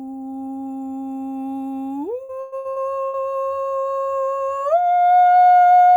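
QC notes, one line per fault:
2.23–3.17 s, repeated packet loss (robotic sound): the music turns choppy and robotic as five short holes, the longest 112 ms, are patched by stretching the preceding sound. About 37% of the stretch is filled in this way, so it is a recurring robotic patter rather than one clean dropout.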